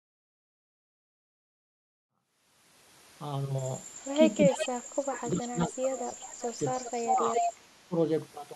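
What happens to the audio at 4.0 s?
From 4.0 to 4.04 s, a very faint copy of the speech returns 385 ms late. This is an echo leak, likely from incomplete echo cancellation on a loudspeaker.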